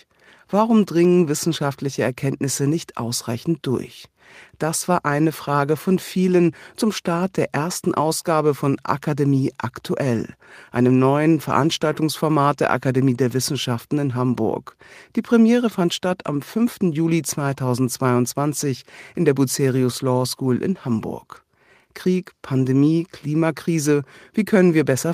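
No technical faults can be heard anywhere in the speech.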